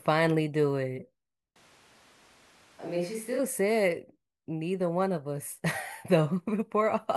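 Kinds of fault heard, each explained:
Switch to a distant microphone: speech abruptly turns roomy, thin and quieter, likely a farther mic; waveform steps down, spectrogram loses bass and gains background noise.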